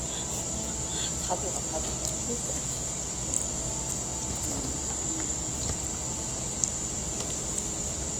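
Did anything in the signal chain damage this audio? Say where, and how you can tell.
Yes, at the codec stage. From start to finish the sound is rough and grainy, with tonal parts turning noisy rather than swirly. That points to likely Opus compression in its music (CELT) mode, filling starved bands with folded or noise content, consistent with a lowish rate near 24 kbps.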